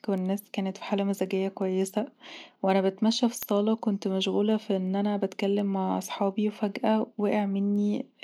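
Speech runs under a train of word clock ticks from 0.18 s to 8.12 s: around twenty clicks spaced roughly every 0.4 s. The receiving device is running on its own clock rather than locking to the incoming digital stream, drifting by something like 70 ppm, so at each slip one sample is dropped or repeated. On a spectrogram these show as thin, evenly spaced vertical broadband lines. Zoomed into the waveform, each is a one-sample step or kink in the trace.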